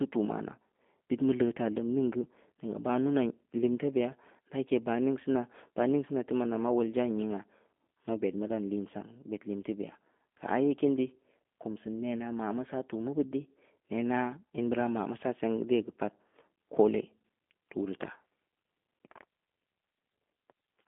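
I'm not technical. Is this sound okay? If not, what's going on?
No, not quite. From start to finish, the speech has been squeezed through the G.729 codec, a compression scheme built for internet phone calls. Instead of keeping the actual sound, it stores a rough recipe for the voice and rebuilds it at the other end. That's why it sounds a bit rough and synthetic, with obvious damage. It also cuts everything above about 3.7 kHz, so the voice sounds thin and boxy, like an old phone line.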